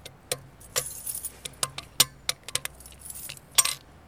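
Sample clock jitter runs throughout: timing errors of roughly 2 microseconds smear the waveform, adding a hiss around 20 dB below the sound that swells on loud, bright passages.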